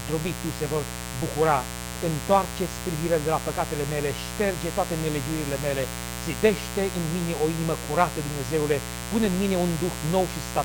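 A mains buzz runs under the audio for its whole length, and it's fairly loud, sitting not far below the wanted signal. It's a steady, raspy buzz built on 60 Hz, with harmonics stacked up into the kilohertz range. That points to sharp switching spikes getting in twice per mains cycle, from something like a dimmer, a rectifier or an unshielded cable near the signal path.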